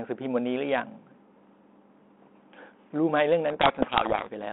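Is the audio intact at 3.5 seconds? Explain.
No. At 3.5 s a codec payload misread begins and runs to about 4.30 s. The two ends of the link disagree on the bit order of the G.726 code words, so the decoder takes each code word with its bits reversed and rebuilds the wrong prediction differences from them. The speech, until then telephone-band audio from 200 Hz to 3.5 kHz with light damage from 32 kbit/s G.726, is buried under harsh distortion for that whole span.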